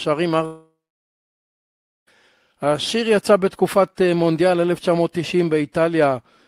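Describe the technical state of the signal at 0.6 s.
At 0.6 s the speech is inside a long network dropout running from 0.45 to 2.09 s: the last sound smears into a fading buzz, then about 1.3 s of near silence. It is likely lost transmission; unlike a brief glitch, speech resumes with roughly 1.6 s missing.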